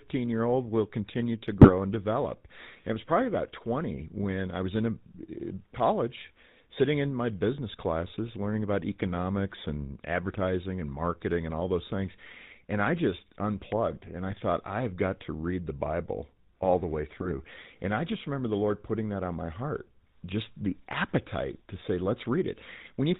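From start to finish the speech carries the gravelly, buzzy texture of the GSM full-rate codec, which fits a 13 kbps stream. The codec rebuilds the voice from a coarse model of the vocal tract excited by a thinned-out pulse train, so the roughness is plainly audible and nothing survives above 4 kHz. Unlike plain band-limiting, this adds a constant rasp within the remaining band rather than only dulling the top.

GSM bit errors break through three times, at 1.61 to 1.70 s, 14.29 to 14.33 s and 17.17 to 17.33 s. Corrupted bits reach the decoder's filter, pitch and gain values, so each affected stretch of about 20 ms turns into a brief squawk, pop or gargle. The second burst is the shortest and the third the longest, spanning several consecutive frames. Packet loss leaves gaps or smeared repeats, but these errors inject harsh, wrong-sounding bursts.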